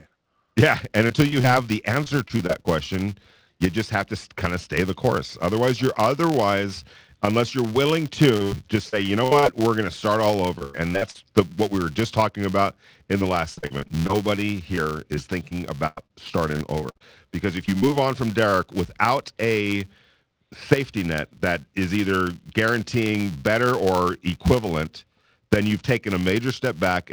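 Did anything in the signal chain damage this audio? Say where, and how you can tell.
Yes. A filter restarted on every block damages the whole clip, in the processing stage. A steady buzz at 200 Hz tracks the speech level, which fits blocks of about 5 ms. Each block starts from zero state, so a waveform shows a small tick every 5 ms and a spectrogram shows a harmonic comb at 200 Hz multiples.

Repeated packet loss (robotic sound) comes from the network stage, in five stretches: 1.07–2.67 s, 8.37–9.44 s (between "otherwise unless you're willing" and "we're going to start"), 10.58–11.16 s, 13.18–14.11 s and 14.75–17.02 s. Bursts of gaps, the longest about 0.1 s, are patched by extending the last sound. That gives a choppy texture with pieces missing and smeared, repeated-looking spectrogram columns.

Short concealed packet loss follows at 17.78–17.84 s and 17.88–17.91 s, just before "on from". 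Tens of milliseconds went missing and were filled by continuing the preceding sound, then cross-faded back. It is heard as a brief wobble, with a blurred sliver on the spectrogram.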